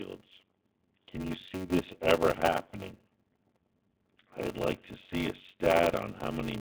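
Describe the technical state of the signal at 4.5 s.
At 4.5 s the speech is caught in a block size mismatch (padded) that runs through the whole clip. Each block the next stage reads (the sound fits a 512-sample block) is only partly filled, and the rest is padded with silence. That chops a gap into every block, producing a steady buzz at about 93.8 Hz, and the speech drags at 0.625 times normal speed while keeping its timbre. Under that buzz, the Speex line's narrow band tops out near 3.6 kHz.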